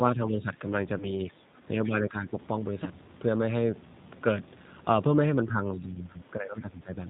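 The whole clip carries the sound of the G.729 codec, in its G.729A form. Its band-limited, slightly gritty and synthetic quality is consistent with an 8 kbit/s low-bitrate coder. The speech is rebuilt from a vocal tract filter, a pitch predictor and a handful of pulses per frame rather than sent as a waveform, so the damage is plainly audible. On a spectrogram nothing sits above 4 kHz, and the harmonics look smeared and coarse.

From the start to 0.62 s the speech level sags repeatedly, with the deepest dip around 5 dB, and roughly a third of a second is affected in total. This is likely speech suppressed in double talk: the echo canceller, hearing both sides at once, turned the near talker down along with the echo. The waveform envelope shows shallow notches rather than clean gaps.

Within that stretch, from 0.28 to 0.37 s, there is a faint second voice underneath, about 25 dB below the main speech. 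This is likely the other side's voice leaking through, where loudspeaker sound reached the microphone and survived echo cancellation. On a spectrogram it shows as weak, separate harmonic traces overlapping the main ones.

At 0.98 to 1.11 s and again at 2.84 to 2.89 s the audio is briefly stretched out and then fades. These are cases of VoIP packet loss concealed by the speech codec. About 20 ms went missing each time, which fits a single lost packet. The decoder extended its last pitch and filter with falling gain. The first event lingers well past the gap as the coder recovers. A spectrogram shows a smeared continuation and a gradual energy decay instead of a hole.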